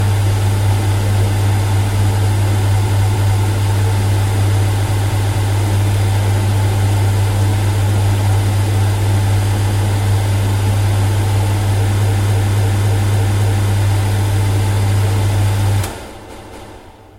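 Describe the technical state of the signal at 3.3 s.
At 3.3 s the sound stutters: a short stretch of about 0.28 s plays, then jumps back and plays again. This is a repeated-frames fault running from 2.86 s to 3.42 s. The same block of compressed frames was decoded three times in a row instead of once, likely from a run of about six frames being written or sent again, which fits the block length heard. The two extra plays lengthen the audio by about 0.56 s.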